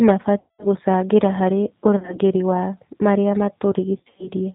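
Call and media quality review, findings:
G.729 codec throughout. Speech rebuilt from a vocal-tract filter, pitch predictor and sparse pulses, with nothing above 4 kHz. Plainly audible as a narrow, rough, slightly synthetic voice, which fits G.729A at 8 kbit/s.

VoIP packet loss concealed by the speech codec at 0.40–0.68 s (before "gũcangĩra harĩ"), 1.96–2.19 s (between "gũcangĩra harĩ" and "wa marĩa") and 3.97–4.28 s. The decoder extrapolates the last pitch and filter with falling gain, giving buzzy or noisy, fading smears. The first event loses about 190 ms. The later two are scattered over about 220 ms, with runs up to 30 ms and 70 ms. The voice stays weak briefly after each.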